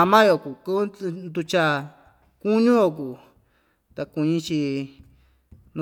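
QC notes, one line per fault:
Nothing stood out on listening to this speech clip.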